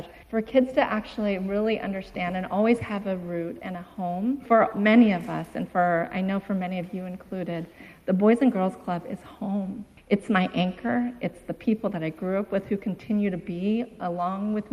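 No technical faults occur at any point, so there is nothing to describe in time order.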